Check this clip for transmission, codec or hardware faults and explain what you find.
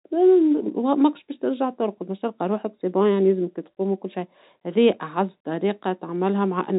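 Nothing stood out on listening to this speech clip.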